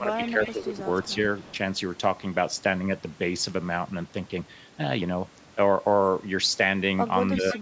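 From 0.0 to 0.35 s the speech dips by roughly 15 dB for about a fifth of a second in total. This is likely speech suppressed in double talk, with the echo canceller turning the talker down while the far side spoke.

Overlapping it, from 0.1 to 0.61 s, a faint copy of the speech trails 332 ms behind at around 20 dB below the speech. The likely cause is an echo leak, where a loudspeaker's canceller failed to remove everything its microphone picked up.

Between 0.53 and 0.86 s the speech sags again by around 10 dB, likely the same double-talk suppression.

Quieter echo scraps, about 30 dB down and again 332 ms late, return at 1.04 to 1.13 s and 1.38 to 1.56 s. These are likely further leakage.

Near the end, 7.35 to 7.56 s brings a shallow dip of roughly 5 dB, likely double-talk suppression once more. Right at 7.53 to 7.59 s a stronger delayed copy appears, about 15 dB below the speech, likely echo leaking through again.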